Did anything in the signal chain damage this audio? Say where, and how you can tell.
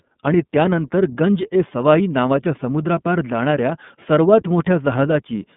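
Yes, at the codec stage: iLBC coding throughout, with nothing above 3.8 kHz and a rough, synthetic texture from independently coded 30 ms frames.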